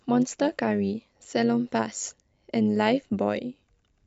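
Overlap-add ripple runs through the whole speech clip: the audio was split into windowed frames and rejoined with overlaps that fail to sum to constant gain, so level swings by about 6 dB around a hundred times a second, giving a metallic buzz with extra tones around each note.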